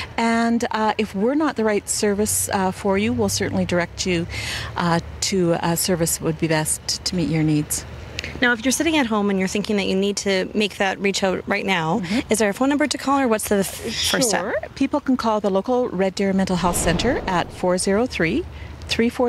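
No faults are audible anywhere in the recording.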